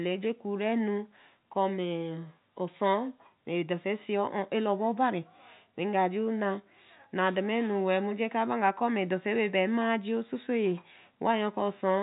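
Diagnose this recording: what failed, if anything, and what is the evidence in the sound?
Nothing here has failed: the speech reaches us through an ordinary G.711 telephone path, with the top end stopping at about 3.8 kHz as that format should, and there's nothing in the sound that points to trouble at any stage along the way.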